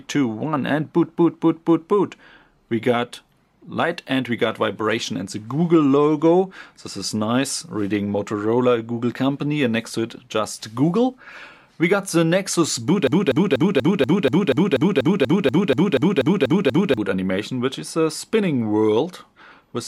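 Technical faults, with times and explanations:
13.07–16.97 s, broken-record loop: the playback or streaming chain likely stalled and kept resending the last fragment it had buffered instead of fresh audio. A piece about 0.24 s long repeats exactly, back to back, 16 times, giving a rapid, mechanical stutter that cycles roughly four times a second. Because the same snippet fills those nearly four seconds, whatever should have played there is lost, and the sound resumes afterward with that gap.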